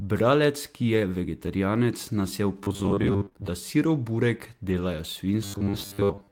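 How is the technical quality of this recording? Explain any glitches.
The recording has clear technical faults: two stretches of robotic buzzing, a burst of packet loss, and a short patch rebuilt from error correction.

From 2.64 to 3.50 s, between "vegetarijanec nas je" and "da sirov burek", and again from 5.45 s to the end at 6.31 s, there is robotic sound from repeated short buffers. The likely cause is audio arriving too seldom, so playback loops the last 10 ms of sound, and most of the signal is repeated rather than new. That loop imposes a fixed 100 Hz buzz, giving a stiff, metallic tone that only loosely tracks the speech.

Inside the first stretch, from 3.25 to 3.37 s, just before "da sirov burek", repeated packet loss adds robotic choppiness. Three holes, the longest 22 ms, were patched by extending the preceding sound, covering nearly half the span and leaving it broken and mechanical.

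From 4.69 to 4.83 s, right after "da sirov burek", a lost packet rebuilt from error correction can be heard. The pattern points to about four lost packets, and the following packets carried low-bitrate copies of them. About 80 ms play without a gap but sound rougher and noisier.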